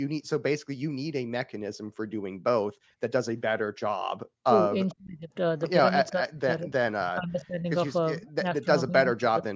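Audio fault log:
3.98–4.14 s: background gated by the echo canceller. The room sound drops by about 40 dB for an instant as the canceller clamps the microphone, then returns.
4.45–5.31 s, 6.11–7.66 s, 8.2–9.48 s: speech suppressed in double talk. The voice dips deeply or cuts out in pieces, likely from the canceller turning down overlapping talk.
4.89–4.94 s: echo leak. A faint scrap of the voice returns 451 ms late, well below the speech, likely loudspeaker pickup the canceller failed to remove.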